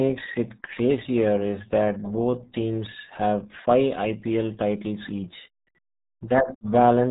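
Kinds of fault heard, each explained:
RealAudio 14.4 codec: The speech sounds muffled and gargly throughout, with heavy coding damage and nothing above 3.8 kHz. That narrow, smeared sound fits the RealAudio 1 dial-up speech codec at around 8 kbit/s, which discards the upper band and coarsely approximates what remains.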